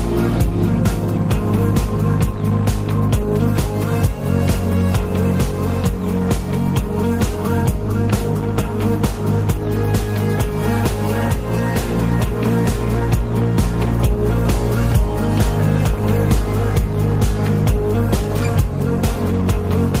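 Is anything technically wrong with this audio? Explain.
No, nothing technically wrong stood out on listening to this audio.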